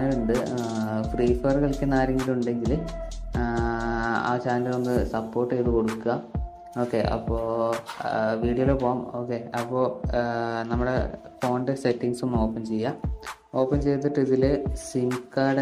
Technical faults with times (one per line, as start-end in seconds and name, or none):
3.35 overlap between stream segments